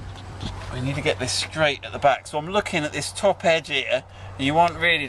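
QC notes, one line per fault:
Nothing to log here, as no faults turned up anywhere in this audio.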